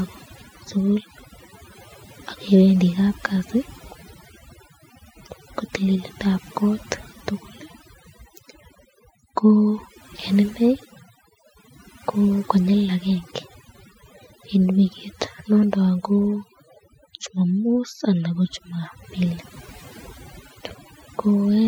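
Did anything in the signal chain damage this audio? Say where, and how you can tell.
Yes. A noise suppressor in the call processing was set far too aggressively, so across the whole clip bands near its noise estimate are pulled almost to nothing. That overdone noise removal leaves a lowered background broken up into twinkling, warbling specks.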